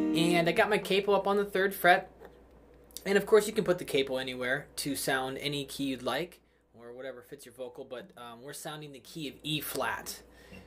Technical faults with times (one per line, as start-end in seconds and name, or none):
2.51 overlap between stream segments